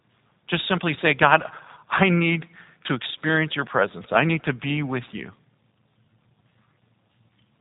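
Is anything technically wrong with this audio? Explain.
Yes, the whole clip carries G.729 codec damage, plainly audible throughout. Nothing above 3.8 kHz survives, and the speech sounds slightly rough and synthetic, which fits 8 kbit/s G.729A rebuilding each 10 ms frame from a vocal tract filter, pitch predictor and sparse pulses.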